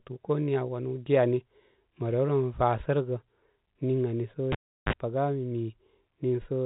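Speech over a narrowband telephone path, which, with nothing above 3.8 kHz, fits G.711 mu-law coding, has one clear fault: a cable pulled and plugged in from 4.52 to 4.93 s. A pop opens a dropout of about 0.36 s, then a roughly 41 ms burst of 50 Hz mains buzz as the plug's tip makes contact before the ground does, and a second pop as the sound returns. On the waveform, two sharp spikes bracket a flat gap with a short hummy ripple near its end. A spectrogram shows vertical broadband lines at each pop and a thin low-frequency stack at 50 Hz and its harmonics during the buzz.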